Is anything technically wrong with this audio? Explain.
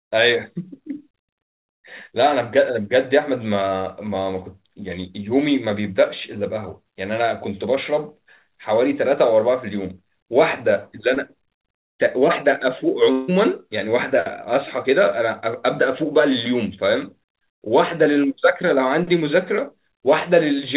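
Yes, there are two breaks in this narrowband call recording, whose content stops at 4 kHz, as expected from a G.711 mu-law call path.

From 11.14 to 11.18 s there is a quick smear or wobble in the speech. This is short concealed packet loss: about 20 ms of audio arrived too late to decode, so the receiver extended the preceding sound across the gap and blended back into the real signal.

From 13.12 to 13.30 s the speech turns into a buzzy or hissy, fading continuation lasting about 160 ms, with no true silence before normal audio resumes. The likely cause is a long network dropout: no packets arrived for that stretch, and the receiver synthesised sound from the last received audio to fill the entire gap.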